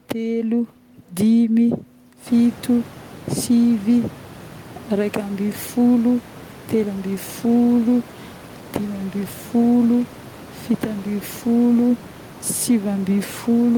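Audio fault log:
No technical faults detected.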